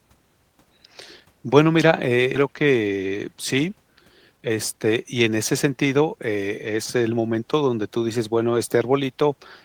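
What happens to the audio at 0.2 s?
Nothing goes wrong at 0.2 s; the speech at that point plays through intact, with no dropout, click or distortion.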